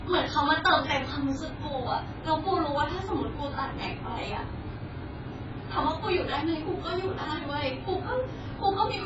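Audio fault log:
Throughout, AAC compression: speech is cut off above 7.6 kHz and heavily smeared, likely from AAC-LC at a very low bitrate near 12 kbps quantising coarsely.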